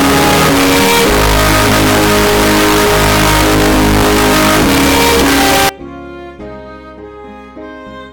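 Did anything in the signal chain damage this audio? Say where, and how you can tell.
Yes. From the start to 5.69 s the audio is a wall of harsh, clipped-sounding distortion, and quiet moments come through as loud as everything else. That points to sample-format conversion. The likely cause is signed and unsigned mixed up in the 16-bit data, so the top bit of every sample is flipped. Each zero crossing turns into a full-scale jump. After 5.69 s the harshness stops.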